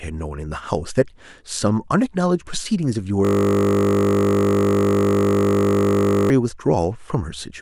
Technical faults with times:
3.25-6.30 system hang loop

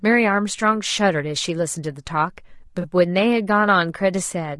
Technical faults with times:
0.00-4.60 low-delay AAC compression
2.81-2.85 AAC frame loss with concealment

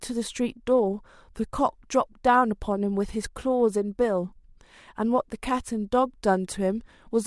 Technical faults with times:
0.12-7.23 clock slip clicks

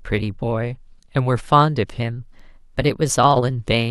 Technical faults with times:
2.01-3.33 drift correction step

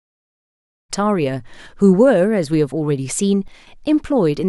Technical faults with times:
3.48-3.67 sudden gain jump

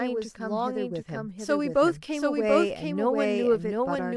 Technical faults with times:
0.00-4.16 doubled audio track

